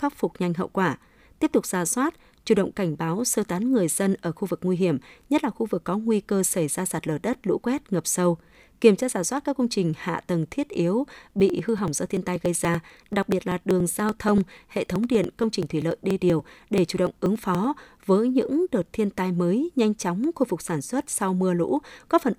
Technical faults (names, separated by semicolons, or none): periodic USB or driver dropouts